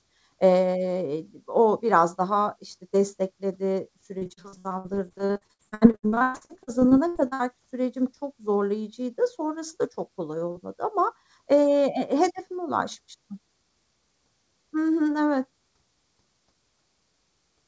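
From start to end, a channel delay of a fraction of a millisecond causes comb filtering. Summing to mono cuts notches starting near 3 kHz, so the speech sounds hollow and phasey.

From 4.18 to 7.41 s, after "biraz daha işte destekledi", repeated packet loss brings dozens of gaps up to 117 ms. Patching covers 42% of the span, so it sounds choppy and robotic until "sürecim çok zorlayıcıydı".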